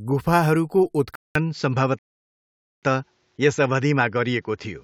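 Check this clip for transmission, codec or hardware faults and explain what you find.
Two faults are audible in this speech clip.

From 1.15 s to the end, after a silence of about 200 ms, the sound turns duller and boxier, with nothing above 7.6 kHz and a new noise floor roughly 45 dB down, at much the same level. This likely comes from the input switching to a poorer device with a narrower band.

From 1.99 s to 2.83 s, the audio drops to silence and then picks up exactly where it stopped. This is a rebuffering stall: the player ran out of downloaded audio and waited for more, adding 0.84 s without losing anything.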